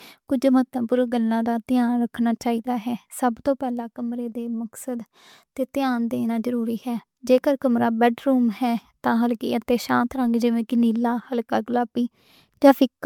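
Repeated MP3 re-encoding, likely around five passes in a chain that fits 128 kbit/s, has left this speech clip with generation loss throughout: a swirly, hollow, smeared quality beyond what that bitrate alone gives, softened attacks, and nothing above 20 kHz.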